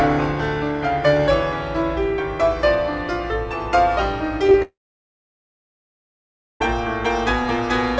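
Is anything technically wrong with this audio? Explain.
Yes, there are two problems, both in the back half of this music clip, which has come through a call path with nothing above 8 kHz, consistent with a G.722 codec.

First, short concealed packet loss at 4.47–4.49 s and again at 4.51–4.54 s. Each time about 20 ms of audio didn't reach the decoder in time, so the receiver patched the gap by extending whatever was sounding, then crossfaded back into the real signal. You hear it as a quick pair of tiny smears or wobbles, with a sliver of the music briefly replaced by a stand-in.

Second, a long network dropout from 4.62 to 6.61 s, roughly two seconds where no audio got through at all. The receiver tries to carry the last sound forward as a fading buzz or hiss, but that gives out quickly, and for nearly 1.9 s you're left with silence. When the music resumes at 6.61 s it picks up further along, with the missing stretch simply gone. 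That pattern points to a likely connection stall.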